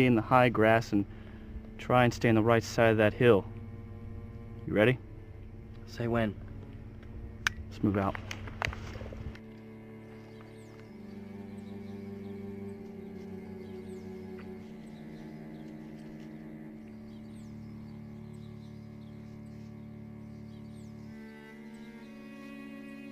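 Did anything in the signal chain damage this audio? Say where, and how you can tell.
No, nothing in the signal chain audibly damaged it.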